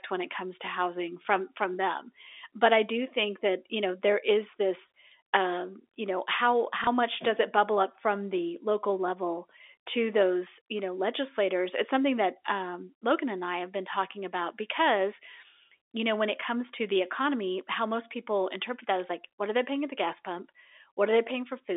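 At 6.84 to 6.87 s, between "um you know how" and "much does it bubble", packet loss with last packet repeated occurs. A 30 ms stretch of audio never arrived, most likely a single dropped packet, and the receiver filled the gap by replaying the previous chunk. The repeat comes through briefly as a small blip over the band-limited telephone sound.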